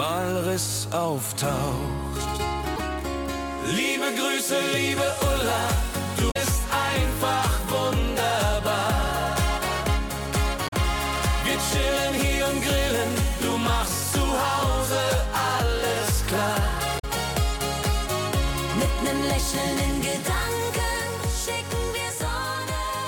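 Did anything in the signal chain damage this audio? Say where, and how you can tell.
Yes, at the codec stage: damaged data in a compressed stream. Short disturbances of about 75 to 90 ms break in at 2.73, 6.28, 10.65 and 16.96 s. Corrupt bytes in the encoded file made the decoder misread those frames and lose sync until it found the next valid frame header. Each one is a brief break where the decoder loses its place in the stream.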